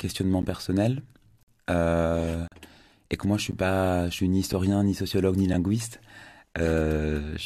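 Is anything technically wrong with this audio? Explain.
Yes. There are gaps between stream segments: the time stamps of consecutive 1-second segments leave small holes that the player fills with silence, so the speech drops out with hard edges about once a second, at 0.42, 1.43–1.48, 2.48–2.52, 3.52, 4.53, 5.53 and 6.54 s, each lasting between 5 and 49 ms.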